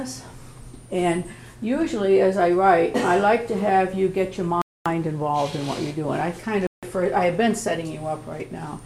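Interference likely delayed packets on the wireless link, so the headphones' buffer emptied and playback paused, a Bluetooth stall. The sound drops to silence at 4.62 s for about 0.24 s, then again at 6.67 s for about 0.16 s.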